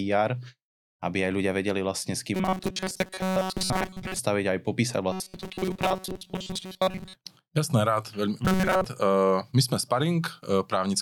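Robotic sound from repeated short buffers affects the speech from 2.35 to 4.19 s after "vedeli vlastne s kým", from 5.12 to 7.15 s after "aj popísať", and briefly from 8.45 to 8.85 s after "rád veľmi". The likely cause is audio arriving too seldom, so a fragment of about 5.3 ms is looped while most of the real signal is skipped. Each repeat imposes a fixed 188 Hz buzz, making the voice a rigid, metallic drone that only loosely tracks the syllables.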